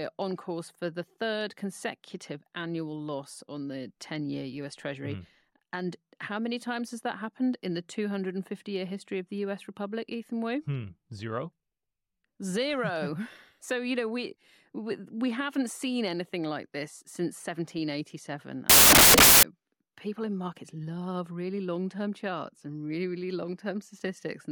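A burst of loud, harsh broadband noise swamps this speech clip from 18.70 to 19.43 s, roughly three quarters of a second, ending just before "people in markets love". This is samples built from the wrong bytes: over that stretch the reader assembled each sample's bytes out of order or offset by one, so the rapidly changing low-order bits landed in the high-order position. Every value becomes effectively random at large amplitude, which is why the passage turns to loud hiss.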